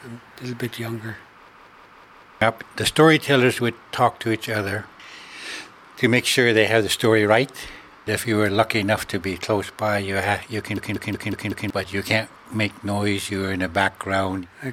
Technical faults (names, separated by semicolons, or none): system hang loop